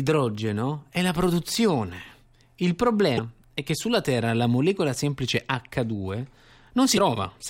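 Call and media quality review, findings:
Damaged data in a compressed stream, 3.15–3.19 s (before "è che sulla") and 6.94–6.98 s: short glitches in the speech; corrupt frames misread by the decoder, which loses sync and hunts for the next header.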